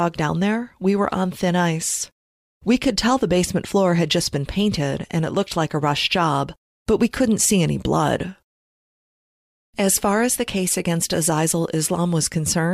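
No technical faults are audible anywhere in the recording.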